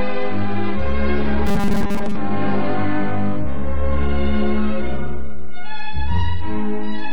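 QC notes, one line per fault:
throughout: DC offset. The entire waveform sits displaced from zero by a constant amount, so it is not audible as a sound of its own; it shows as steady energy at the very bottom of the spectrum and eats into headroom on one side. Unlike low-frequency rumble or hum, nothing moves or cycles: the energy is fixed at 0 Hz, and the offset is present from start to finish rather than drifting.
1.47–2.17 s: robotic sound from repeated short buffers. For about 0.7 s the sound turns into a rigid, metallic buzz at 200 Hz that still loosely tracks the original contour. Roughly seventy percent of this stretch is repeated material, with a 5 ms segment looped in place of audio that is skipped. That period fits the buzz, and a buffer underrun is the likely cause. What sets it apart from ordinary distortion or a codec warble is the fixed pitch imposed regardless of content.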